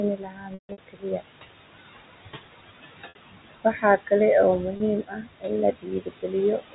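A speech recording sits under a noise suppressor that pulls the background down by about 20 dB throughout. You can hear the room noise, which starts only about 11 dB below the talker, dropping away in the gaps and swelling back under the voice. That's classic noise suppressor artifacts: the processor is deciding band by band, frame by frame, what counts as steady noise and clamping it. The same suppressor also bites into the talker, so there's speech cut by the noise suppressor in several stretches. From 0.16 to 2.03 s, roughly a second of material gets pushed down, as deep as about 22 dB. From 2.24 to 4.11 s, about three quarters of a second is hit, at around 21 dB. Shorter patches fall at 5.03 to 5.5 s, 5.72 to 6.34 s, and 6.58 s to the end, all around 20 to 21 dB down. Parts of the speech sound swallowed or faint there because the suppressor has mistaken them for background. On top of that there's packet loss with pitch repetition. 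Between 0.54 and 0.78 s, about 210 ms goes missing across a 240 ms window, with the longest run 150 ms, which fits a handful of lost packets. You get a held, buzzy tone that fades toward silence before the speech cross-fades back in. Shorter hiccups at 3.09 s (60 ms) and 4.77 s (30 ms) just sound like a brief sustained buzz where the receiver repeated the last pitch cycle.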